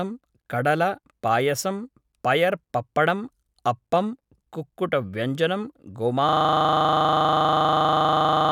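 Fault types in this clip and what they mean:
System hang loop: the computer or its audio driver froze at 6.29 s while the sound hardware kept replaying one 40 ms slice of its buffer, so the speech gives way to a rigid 25 Hz buzz that continues, unchanged, until the clip ends.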